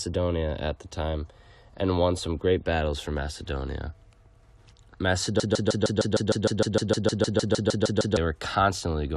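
At 5.40 s the speech locks into a broken-record loop that lasts until 8.17 s. A fragment of about 0.15 s repeats exactly, back to back, 18 times. The result is a rapid, mechanical stutter with no variation between cycles. The likely cause is a stall in the player, encoder or stream, which kept resending the last piece it held. Whatever should have played in those 2.8 s is gone.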